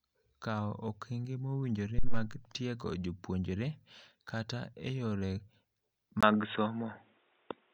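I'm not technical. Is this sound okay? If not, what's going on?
No. Input switched to a poorer device, at 6.21 s until the end. The speech suddenly turns duller and boxier, as if coming through a headset, after a tiny gap of about 20 ms. This is likely because the recording jumped to a different, lower-quality microphone partway through. That microphone cuts off everything above about 3.8 kHz, which removes the crisp edges of the speech, and it adds faint background noise, while the loudness stays about the same.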